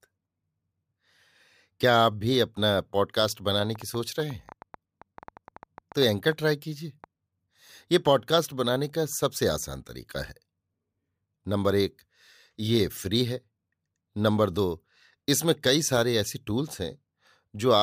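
From 3.64 s to 7.05 s there's a train of clicks riding over the speech: about twenty sharp, near-identical pops at roughly 6.5 per second, spaced unevenly rather than ticking like a metronome. They peak at around the level of the speech itself, so they're easy to hear and keep going through the gaps too. The cause is likely electrical interference from nearby gear or a faulty connection or power supply.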